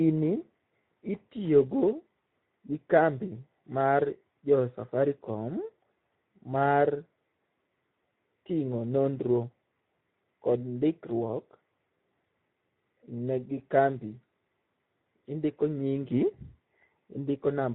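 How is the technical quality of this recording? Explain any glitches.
The quality is noticeably compromised, with one codec problem present from start to finish. Speex codec damage runs throughout: the speech sounds hoarse and noisy. That fits a low setting around 11 kbps leaving too few bits to model the excitation.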